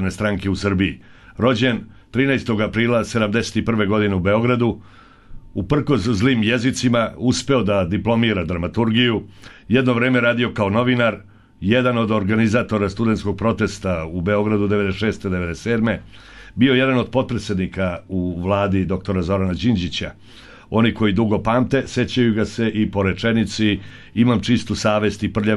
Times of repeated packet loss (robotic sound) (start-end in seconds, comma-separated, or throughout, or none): none